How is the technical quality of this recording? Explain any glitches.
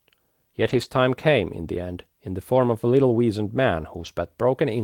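The recording has two short rough patches where the audio briefly turns grainy, both from a lost packet rebuilt from error correction. The first runs from 0.61 to 0.87 s, and the second from 4.01 to 4.07 s. Each time, the next packet carried a low-bitrate backup copy of the missing one, so the decoder played that copy instead of leaving a gap. The speech keeps going but sounds coarser and noisier for about 140 ms, then about 40 ms, which fits roughly seven lost packets and then two.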